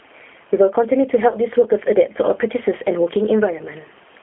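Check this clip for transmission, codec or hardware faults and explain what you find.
There are three problems in this speech: level pumping, plainly audible narrowband codec damage, and two short dropouts that the decoder papered over.

Gain pumping runs through the whole clip. The level gets pushed down by around 10 dB whenever speech gets loud, so everything sounds squashed and breathing. The likely cause is input gain set far too high, with a fast limiter or compressor clamping each loud moment.

The G.729 codec colours the entire clip, and its damage is plainly audible. At 8 kbit/s it rebuilds speech from a vocal tract filter, a pitch predictor and a few pulses per frame. The line band runs only from about 250 Hz to 3.4 kHz, so the speech comes across thin, rough and slightly synthetic.

VoIP packet loss concealed by the speech codec appears at 1.28 to 1.35 s, a gap of about 40 ms, which fits two lost packets. 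It shows up again at 3.57 to 3.63 s, a gap of about 20 ms, pointing to one packet. Each time, the decoder stretches its last pitch and filter into a buzzy tone or coloured noise that fades. The speech stays weak for a moment after the packets return.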